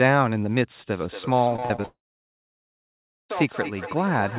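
From 0.91 s to the end, feedback echo between two devices appears. A second device plays back this call, and its sound re-enters the microphone. Each phrase returns roughly every fifth of a second. The repeats sound thinner and ringing, peaking about 11 dB below the speech.

At 1.56 s, repeated packet loss begins, giving a robotic sound until 1.86 s. Several holes open in quick succession, the longest about 39 ms. Each is patched by stretching the previous sound. The result is choppy, with fragments missing.

From 1.86 s to 3.31 s, a long network dropout likely cut the stream. A brief fading buzz continues the last sound, then roughly 1.3 s of near silence follows. The audio resumes without the lost part, still limited to below 4 kHz by the call codec.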